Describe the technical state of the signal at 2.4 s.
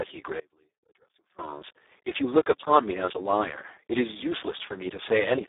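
Speex codec damage is present at 2.4 s, as it is across the whole clip. The speech is squeezed into a telephone band of roughly 300 Hz to 3.7 kHz, with nothing above 3.8 kHz. The codec models the voice with very few bits for its excitation signal, which fits a bitrate near 4 kbps, so the speech comes out heavily degraded: noisy, hoarse and edging toward a robotic, vocoder-like buzz.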